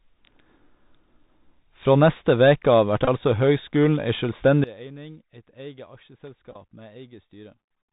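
Throughout, the speech carries the sound of a Bluetooth CVSD headset codec, consistent with a 64 kbps link. The spectrogram shows a hard ceiling at 4 kHz, with granular hiss filling the floor and sibilants turning scratchy where loud high sounds outrun the adaptive step.

From 3.05 to 3.08 s comes a Bluetooth headset packet repeat. Lost packets were replaced by repeats of the previous one, about 26 ms in total with runs up to about 20 ms. It is heard as a brief buzz near 267 Hz and shows as repeating 3.75 ms blocks in the waveform.

At 4.64 s a sudden gain jump drops the level by about 21 dB until the end, voice and noise together. The waveform envelope steps down abruptly, likely from an unramped digital gain change.

At 6.51 to 6.56 s the Bluetooth headset packet repeat returns, again about 26 ms lost but spread over 45 ms in shorter runs, giving a ticking buzz.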